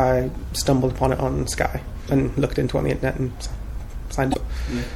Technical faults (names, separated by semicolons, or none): MP3 compression; damaged data in a compressed stream